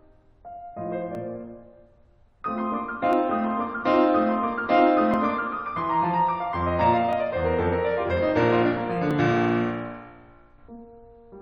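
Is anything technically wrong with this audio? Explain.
Yes. This music has an overlap between stream segments, heard at 1.15, 3.13, 5.14, 7.13 and 9.11 s. That is roughly every 2 seconds. Each time, the player trims 6 to 17 ms where segment timings overlap. The waveform jumps, giving a tiny skip.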